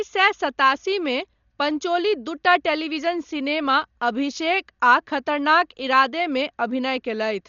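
Dolby Digital compression, present throughout the speech, is likely the cause of the heavy coding damage heard from start to finish. Nothing reaches above 6.9 kHz, which fits an encoder starved to a low bitrate of around 40 kbps. At that rate it narrows the band and leaves many frequency lines without detail, filling them at decode with dither noise. The speech sounds dull and muffled, with a rough, fluttering grain around its tonal parts.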